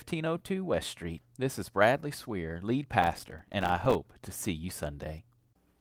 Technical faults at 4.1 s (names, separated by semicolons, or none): clock drift between sender and receiver; repeated timing corrections